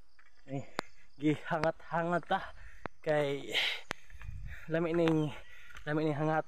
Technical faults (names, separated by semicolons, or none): loud pop